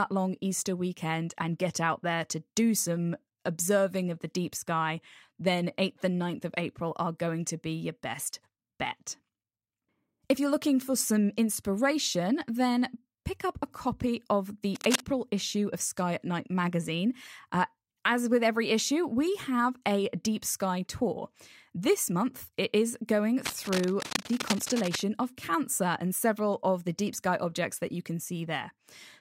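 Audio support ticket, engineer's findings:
Cable scratch noise, 14.75–15.02 s, between "up a copy of" and "issue of": dense, uneven scratching burst, strong, only about 5 dB below the speech. Likely worn cable or connector flexing, contact resistance fluctuating. Second burst 23.45–25.04 s, after "month it is going": longer rustle, about 10 dB under the speech, likely same mechanism. Reseat or replace lead and connectors.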